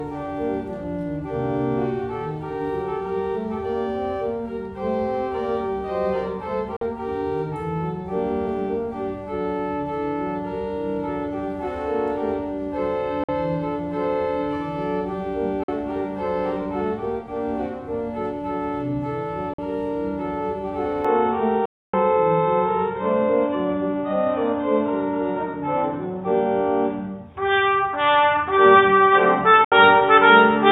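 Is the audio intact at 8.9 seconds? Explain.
Yes, at 8.9 seconds the audio is intact, with no dropout, click, distortion or other fault heard at that moment.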